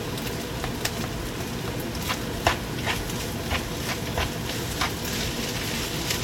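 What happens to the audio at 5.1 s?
Nothing goes wrong at 5.1 s; the sound carries on intact there with no dropout, click or distortion.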